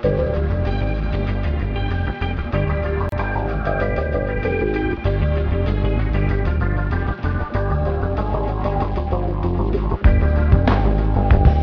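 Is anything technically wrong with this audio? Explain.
Yes. At 3.09 to 3.12 s there is a gap at a join of encoded pieces. The audio was encoded as separate sections and spliced back together without removing the encoder's start-up delay and the padding on the final frame of the earlier section, so that dead time stays in the stream. The result is a hole of about 30 ms in otherwise continuous sound, with smeared edges, after which the sound resumes exactly where it left off.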